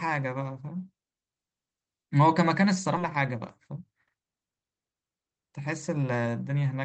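At 2.97 to 2.99 s, the receiver discarded about a second and a half of waiting speech, a skip ahead. Playback jumps forward, joining both sides with no gap. From 3.03 to 5.10 s, the overfilled jitter buffer cut pitch-period pieces repeatedly, removing about half a second: a jitter buffer speed-up making speech run 22% faster, hurried but at unchanged pitch.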